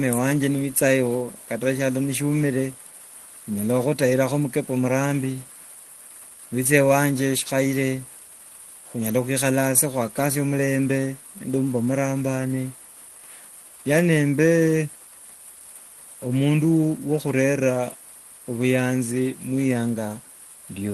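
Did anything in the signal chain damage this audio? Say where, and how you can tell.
No, no faults found.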